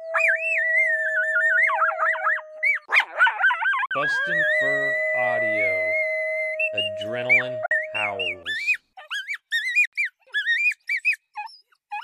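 Packets likely failed to reach the Bluetooth headphones in time at 3.86 to 3.91 s, 7.66 to 7.71 s and 9.85 to 9.93 s, causing Bluetooth dropouts. Each leaves a silent gap of about 46, 46 and 70 ms, consistent with two, two and three lost packets. The audio then resumes further along, as though it had kept playing.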